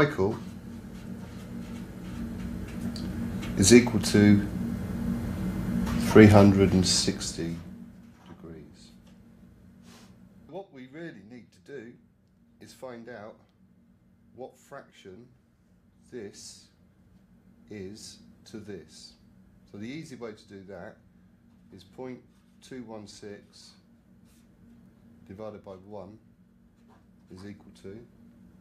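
No technical faults can be heard in this clip. Where the level is brought up or down, the change is gradual and smooth, as a fader move should be.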